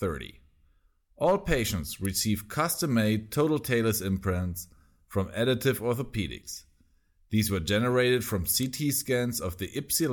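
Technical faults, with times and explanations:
2.05 s and 8.63 s, electrical switching spike: two sharp snaps sit on top of the speech, each only a few milliseconds long, and they land as separate hard ticks that don't blend into the sound underneath. That tight, brittle character is likely from a nearby switch, motor or static discharge throwing a brief arc that the audio line picked up. The snap is added on top rather than cutting anything out, so the speech carries straight through each one.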